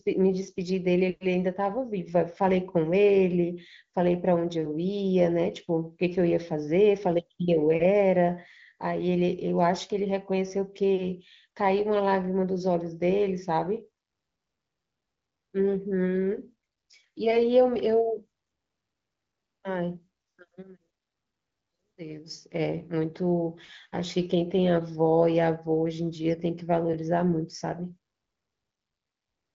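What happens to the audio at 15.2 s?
Nothing goes wrong at 15.2 s: the speech carries on intact there, with the band-limited, lightly coded character of AMR wideband (HD Voice) transmission and no dropout, glitch or other fault at that moment.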